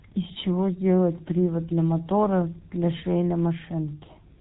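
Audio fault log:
Throughout: G.723.1 codec, heavy damage. The speech is muffled and hoarse with smeared consonants. Nothing above 4 kHz gets through, and the voice model updates only every 30 ms frame at about 6.3 kbit/s, so fricatives and quick transitions blur together.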